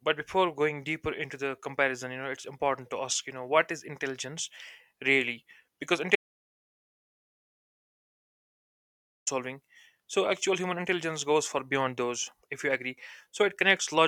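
At 6.16 s the speech hits an audio dropout to silence, dead silence with no room tone, until 9.27 s, likely a lost input or link. About 3.1 s is gone.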